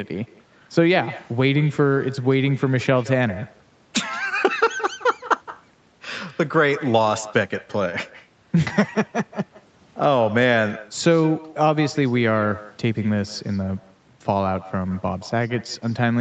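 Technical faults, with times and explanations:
Throughout, echo with no canceller: the far end's loudspeaker is picked up by its microphone, and with nothing cancelling it, the speech returns about 18 dB quieter and roughly 150 ms late, a thin shadow trailing every phrase after the network round trip.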